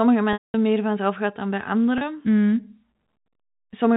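At 0.33 to 0.54 s, packet loss with pitch repetition bridges a 210 ms gap: the last pitch period is looped as a buzzy hold that fades to silence, then cross-fades back into "meer vanzelf gaat dan". At 1.98 to 2.01 s, after "vanzelf gaat dan bij", a 30 ms loss gives only a brief held buzz. On a waveform, each gap shows identical repeating cycles with a decaying envelope. On a spectrogram, it shows flat, evenly spaced harmonic stripes within the 4 kHz telephone band.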